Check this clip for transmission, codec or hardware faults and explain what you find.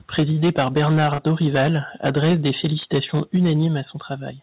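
Three kinds of fault are audible in the speech, all in the first 3.7 seconds.

From 0.13 to 1.78 s and again from 2.05 to 3.66 s, the loudest syllables have a harsh, crackling edge with flattened peaks. This is likely microphone overload: the input drove the converter about 10 dB, then about 8 dB, past full scale, so a small share of samples were clipped.

At 0.2 s and 3.37 s, voice and background drop together by about 3 dB in one abrupt step. The likely cause is a microphone volume step down, where the call software cut the input gain in response to the clipping.

From 1.14 to 1.20 s, there is a brief smear where about 40 ms of audio never arrived. This is short concealed packet loss: the receiver extended the preceding sound to fill the gap, then blended back into the real signal. The call went through a G.711 call path with a 4 kHz bandwidth ceiling.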